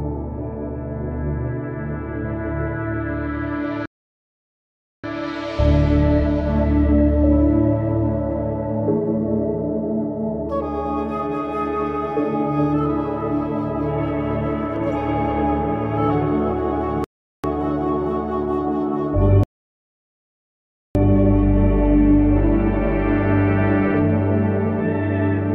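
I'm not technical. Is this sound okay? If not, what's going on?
No. The sound stops three times and then carries on. These are rebuffering stalls. The player ran out of audio it had already downloaded, so it went silent and waited for more. The gaps are at 3.86 to 5.04 seconds (about 1.2 seconds), 17.04 to 17.44 seconds (about 0.4 seconds), and 19.43 to 20.95 seconds (about 1.5 seconds). Each time, the sound picks up exactly where it stopped. Nothing is missing. The pauses just add time.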